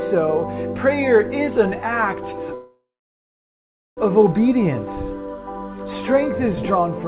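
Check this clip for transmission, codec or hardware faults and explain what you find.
One transmission fault is audible: a call audio freeze from 2.54 to 3.99 s, heard over a narrowband path with nothing above 4 kHz. The sound stalls into a fading buzz, then about 1.15 s of silence, before resuming where it stopped. This is likely jitter-buffer underrun from delayed packets. The spectrogram shows a smeared, decaying band, then a blank gap, with nothing lost but 1.43 s of added delay.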